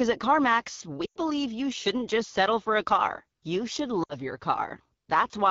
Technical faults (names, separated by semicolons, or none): AMR wideband (HD Voice) codec; lost AMR speech frames